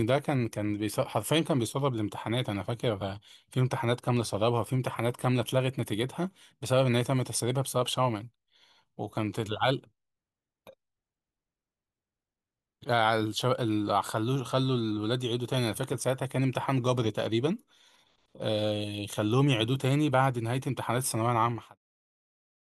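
Speech clip, no technical faults.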